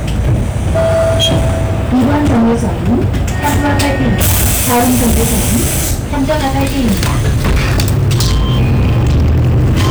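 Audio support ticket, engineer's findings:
Hard clipping throughout the recording, whole 10 s. Harsh fuzz on every loud sound. Input driven about 18 dB past full scale, likely at converter or gain stage, so peaks are sliced flat on roughly a third of samples. Waveform: squared-off plateaus on peaks. Spectrogram: dense harmonic smear to top band.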